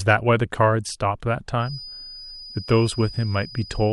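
From 1.57 s to the end of the clip, a feedback whistle sits behind the speech: a thin, steady tone at 4.9 kHz, roughly 20 dB below the voice, swelling and fading slowly in level. The likely cause is a loudspeaker-to-microphone loop hovering just at the edge of feedback, sustaining one frequency without building up. On a spectrogram it shows as a narrow horizontal line at 4.9 kHz starting at 1.57 s. The waveform barely changes, with at most a faint fuzz in the quieter gaps.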